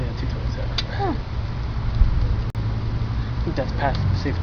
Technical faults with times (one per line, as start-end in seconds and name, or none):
2.50-2.55 Bluetooth dropout